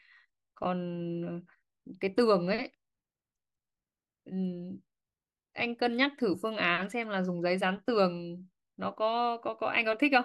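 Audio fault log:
No fault is heard in this speech clip.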